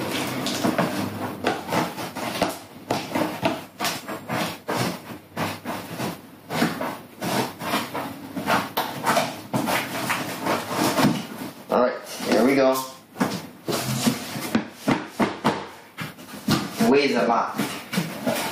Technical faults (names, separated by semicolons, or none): gain pumping